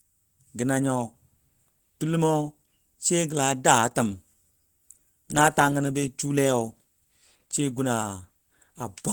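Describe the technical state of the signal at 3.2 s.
At 3.2 s you're hearing the same Opus compression that runs through the whole clip. The speech sounds hoarse, with the damage plainly audible, which fits a hybrid-mode encode at a low rate of about 16 kbps. The likely cause is exactly that, even though the band still reaches around 20 kHz.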